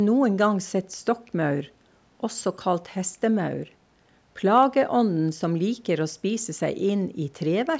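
No faults found; the speech shows only the normal call microphone processing, with the lowest bass trimmed and nothing above 8 kHz.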